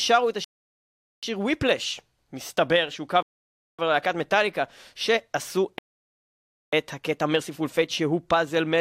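Rebuffering stalls interrupt the speech at 0.44 s, 3.23 s and 5.78 s. Each time the player exhausted its downloaded audio and halted, giving silences of about 0.78 s, 0.56 s and 0.94 s. The speech then resumes exactly where it stopped, so nothing is skipped, only delayed.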